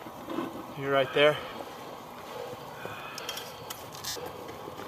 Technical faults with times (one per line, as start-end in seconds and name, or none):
1.49-1.52 lost LE Audio frames
4.08-4.16 lost LE Audio frames